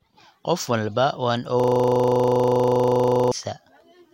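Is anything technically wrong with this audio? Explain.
Yes. From 1.60 to 3.32 s, just after "walba waan", a system hang loop occurs. The system froze. One 40 ms piece repeated, giving a steady 25 Hz buzz.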